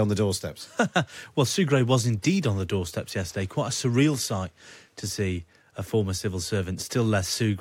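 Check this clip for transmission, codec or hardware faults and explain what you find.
No faults can be heard anywhere in this speech recording. There is no moment in the clip that calls for comment.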